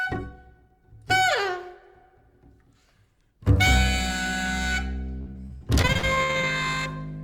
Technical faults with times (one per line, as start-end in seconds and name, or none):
5.21-6.45 repeated packet loss (robotic sound)